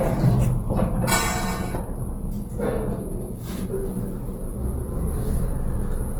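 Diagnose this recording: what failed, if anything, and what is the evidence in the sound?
Codec stage, most likely Opus compression at a low rate, around 16 kbps: the whole clip sounds grainy and noisy, as thin bands get noise-filled, though content still reaches about 20 kHz.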